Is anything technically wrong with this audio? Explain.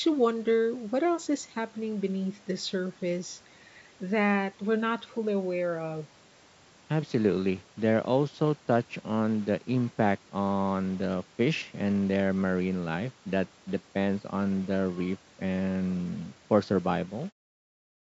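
No, nothing in this speech recording is technically wrong. It has the band-limited sound of a call microphone path, with the lowest bass taken out and nothing above 8 kHz, and it ends with a smooth editorial fade-out around 17.3 s.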